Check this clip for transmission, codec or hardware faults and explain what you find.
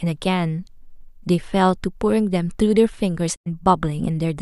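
A digital broadcast dropout occurs from 3.34 to 3.48 s in this speech clip. The receiver stopped getting usable data, either through loss of signal or frames failing their checksum, and muted its output rather than play corrupted material. The speech fades out over about 20 ms into silence and resumes later in the programme. Roughly 96 ms of content is simply missing, which fits about four lost frames. Whatever was transmitted during the gap cannot be recovered.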